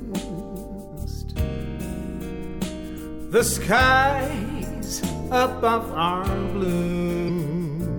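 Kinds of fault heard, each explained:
Damaged data in a compressed stream: corrupted bytes in the coded stream make the decoder misread frames, lose sync and hunt for the next frame header. Here it produces two short disruptions, at about 2.94 to 2.99 s and 7.25 to 7.29 s, each roughly 40 ms long.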